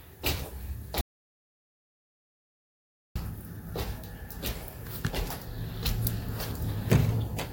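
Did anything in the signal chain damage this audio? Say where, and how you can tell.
Yes. An audio dropout to silence runs from 1.01 s to 3.16 s. The sound stops abruptly mid-flow and resumes just as abruptly, and the gap in between is silent with no room tone or noise floor at all. That points to the capture stage rather than the source going quiet. The likely cause is a lost input, from a disconnected device, a failed link or a stray mute, while the recorder kept writing silence. About 2.15 s of material is gone.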